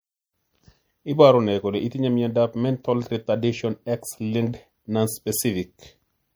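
From start to finish the speech sounds watery and swirly, with sibilants carrying a thin metallic chirp; consonant onsets are smeared rather than crisp. This is likely MP3 compression at a low rate, consistent with roughly 64 kbps: short of bits, the encoder has dropped quieter frequency lines, which flicker in and out between frames.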